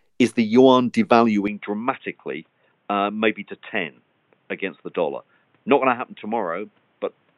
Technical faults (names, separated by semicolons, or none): input switched to a poorer device